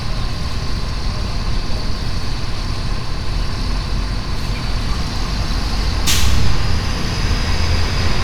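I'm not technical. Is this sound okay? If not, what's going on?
Yes, it's okay, no faults.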